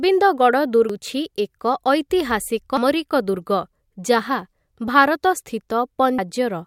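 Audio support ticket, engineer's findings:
Damaged data in a compressed stream: two brief decoding glitches in the speech, at 0.90 s and 6.19 s. Probable component is the decoder input. Corrupt bytes break frame parsing, so the decoder loses sync, misreads the bad frame, then relocks on the next header.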